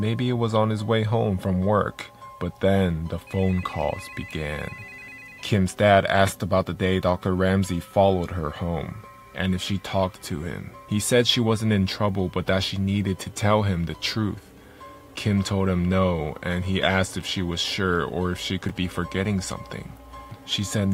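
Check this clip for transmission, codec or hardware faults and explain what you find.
Two faults are present: a bit error spike and a short run of chunks out of order.

At 10.26 s there is a bit error spike. A single sample has one bit flipped, either in memory or on a digital link, so its value jumps by a power of two and returns on the next sample. The result is one sharp, broadband tick lasting a single sample. It has no relation to the surrounding sound and no pitch or decay of its own.

Between 18.66 and 18.70 s there is a chunks-out-of-order fault. A 10 ms block of audio was delivered or written three chunks late, so it plays after the three blocks that should have followed it. No audio is lost, but the sequence is rearranged, with three hard boundaries between mismatched blocks, and the 40 ms stretch sounds briefly jumbled.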